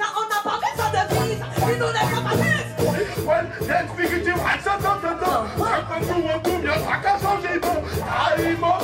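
At 4.5 to 4.54 s there's a brief case of chunks out of order. A 20 ms block got written one chunk late, so two neighbouring slices swap places. Nothing's missing, but the three abrupt joins give a quick jumbled stutter.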